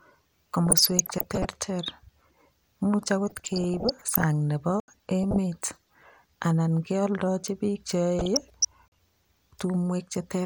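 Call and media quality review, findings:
DAB burbling, 0.67–1.45 s, 3.27–4.24 s, 5.23–5.38 s, 8.19–8.67 s. Weak DAB reception, bit errors of 0.3–0.5 percent slipping past error correction into MP2 frames. Corrupted samples and scale factors jump single sub-bands per frame: noise blips over the speech.

Block of digital silence, 4.80–4.88 s (80 ms) and 8.88–8.92 s (40 ms). Output buffer likely not filled in time, samples replaced by zeros. Hard cut to silence and back without fade: short audible holes in the speech.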